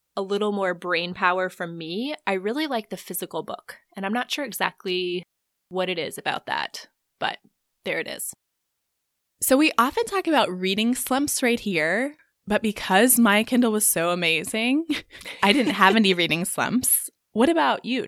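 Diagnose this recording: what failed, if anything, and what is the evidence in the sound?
Nothing failed: no stage of the chain leaves an audible fault anywhere in this speech recording.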